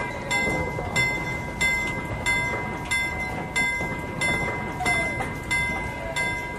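Frames out of order occur at 1.14 to 1.36 s and again at 3.09 to 3.30 s. In each stretch, two adjacent blocks of roughly 93 ms were decoded in swapped order, which fits two codec frames per block. The affected sound plays with its halves exchanged, producing a brief garbled flutter. Nothing is dropped, so the overall timing stays intact.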